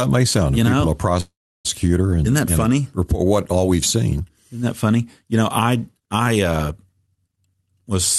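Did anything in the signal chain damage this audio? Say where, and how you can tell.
Yes. A call audio freeze at 1.20 to 1.67 s, right after "sound you know a", was likely caused by delayed packets emptying the jitter buffer. The receiver stretched the last sound into a fading buzz or hiss, then about 0.33 s of silence. Speech resumes at "and isn't that and" with nothing lost, now 444 ms later.

A jitter buffer speed-up at 7.34 to 7.91 s happens in the buffer stage. To shed the added delay, the receiver cut short pitch-period slices repeatedly, removing roughly a fifth of a second. Speech runs at 136% speed but keeps its pitch, so it sounds hurried.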